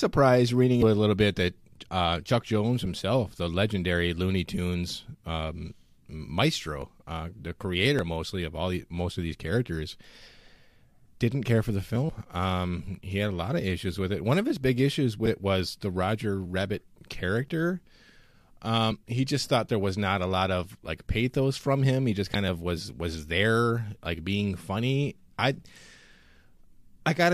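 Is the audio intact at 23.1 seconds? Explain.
Yes, the speech at 23.1 seconds is intact, with no audible fault at that moment.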